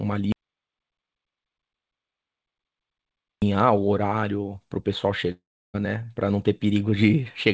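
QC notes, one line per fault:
0.32–3.42 s, audio dropout to silence: the speech cuts out abruptly and about 3.1 s of silence follows, with no room tone or background hiss underneath, before the speech resumes mid-flow. That dead-flat gap most likely means the input signal was lost, through a disconnected device, a failed link or an accidental mute, while the recorder kept writing silence. Whatever was spoken during those three seconds is not recoverable.
5.32–5.76 s, long network dropout: roughly 0.42 s of the speech never arrives. The receiver first stretches the last sound into a short buzzy tail that fades, then leaves about 0.32 s of silence before speech returns further on, skipping the lost portion. The fading-then-silent pattern most likely comes from packets failing to arrive while the concealment ran out. The band-limited sound, with nothing above 8 kHz, fits a G.722 wideband call path.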